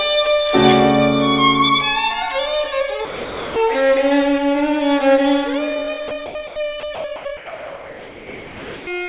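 The sound gives way to steady, featureless noise at 3.05–3.56 s, 6.08–6.11 s, 6.26–6.35 s, 6.80–6.83 s, 6.95–7.04 s, 7.16–7.25 s and 7.37–8.87 s, each time coming back when the detector triggers again. These are likely sound dropped by the voice detector, which took real audio for background and stopped sending while the receiver filled in comfort noise. From 5.46 s to the end, the pace drops to about 0.61 times normal speed at unchanged pitch, so the audio drags. This is likely a time-stretched section, slowed by repeating short pieces of audio. At 6.47–6.56 s the detailed background, sitting about 19 dB below the loud parts, becomes a flat synthetic hiss at the same level. This is likely comfort noise in place of the background during a transmission pause. Throughout, the call path's G.711 codec leaves nothing above 4 kHz.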